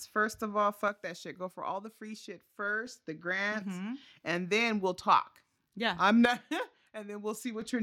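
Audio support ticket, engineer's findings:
Speech level drops abruptly by about 6 dB at 0.88 s, after "first of all", and recovers at 2.87 s before "the grants". Likely one channel drops out ahead of the mono sum. Waveform shows a sudden halved-amplitude block. Spectrogram dims uniformly, no band loss.

Same step down of about 6 dB from 6.25 s to 7.61 s, again likely one stereo channel lost. Flat-topped envelope dip on the waveform, evenly fainter spectrogram across all frequencies.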